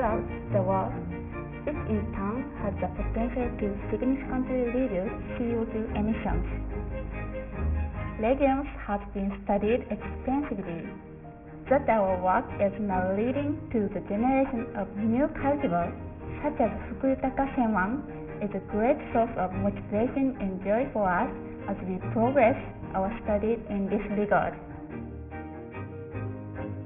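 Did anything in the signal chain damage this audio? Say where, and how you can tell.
Yes. Throughout, the high end sounds gritty and metallic, with harsh tones that fold back just below 3 kHz, roughly 20 dB under the sound. This is aliasing at the sample-rate conversion stage. Downsampling skipped the anti-alias filter, which fits a drop to 6 kHz.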